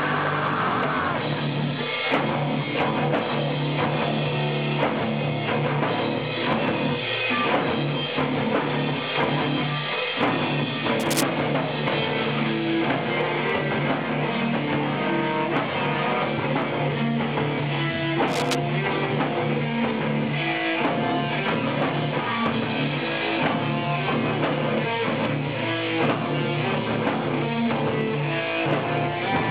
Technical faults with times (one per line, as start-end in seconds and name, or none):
10.99-11.23 cable scratch noise
18.27-18.55 cable scratch noise